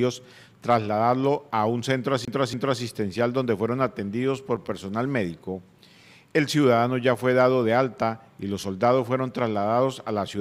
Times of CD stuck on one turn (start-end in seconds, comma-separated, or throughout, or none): 2.25-2.82